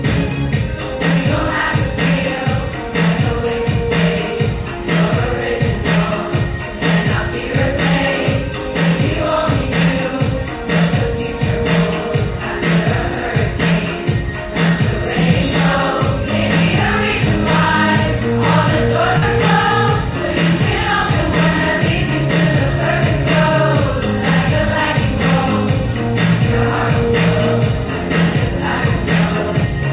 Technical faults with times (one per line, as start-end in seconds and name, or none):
19.18-19.24 short concealed packet loss